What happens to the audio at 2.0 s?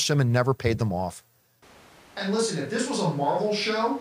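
At 2.0 s the speech is in a switch to a distant microphone, which starts abruptly at 1.63 s after "never paid them off" and lasts to the end. The close microphone has likely dropped out, leaving a farther one, so the sound turns roomy and hollow with thinner bass. The waveform steps down about 5 dB, and the spectrogram shows weaker low frequencies and a steady noise floor about 25 dB below the speech.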